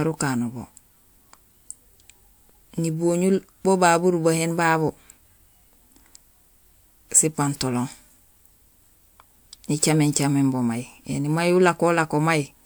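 Nothing technical goes wrong anywhere in this recording: no dropouts, glitches or distortion turn up along the way.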